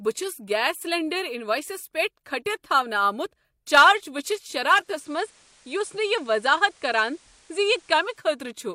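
At 4.63 s the receiver loses its digital signal and blends over about 455 ms to the station's FM broadcast, returning at 8.41 s. This digital radio blending to analogue brings up hiss well below the speech and drops the level about 1 dB.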